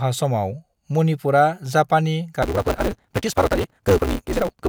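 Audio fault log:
2.42 to 4.68 s, block size mismatch (truncated): from here to the end a buzz at 188 Hz sits on the speech, which runs 1.88 times fast but keeps its timbre. The tail of each longer block gets dropped, which fits a 256-sample read size.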